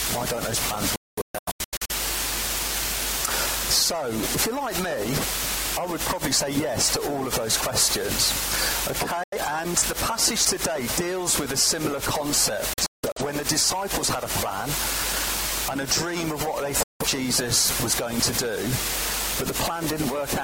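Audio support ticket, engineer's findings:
Digital broadcast dropout, four events:
0.96–1.94 s, holes totalling about 0.68 s, longest 0.21 s
9.23–9.37 s, 85 ms gap
12.73–13.21 s, scattered, longest 0.17 s
16.83–17.05 s, 0.17 s gap

Cuts to silence within 3 ms. Receiver muting on corrupt or missing frames; content in the gaps is lost.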